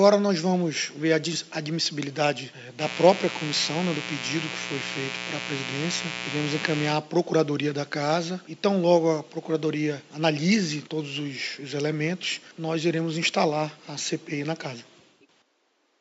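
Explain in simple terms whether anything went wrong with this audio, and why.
Mains buzz from 2.78 to 6.96 s: interference from the 60 Hz power supply leaks in as sharp pulses, making a raspy, fairly loud buzz.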